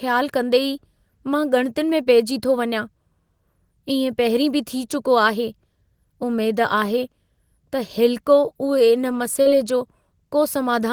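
A brief smear in the speech at 2.03 to 2.07 s, just before "पेइजी थो वञां", and a longer wobble at 9.41 to 9.47 s are both short concealed packet loss. About 20 ms of the call audio arrived too late at the first point and about 40 ms at the second. Each time, the receiver extended the preceding sound to cover the hole and then blended back into the real signal.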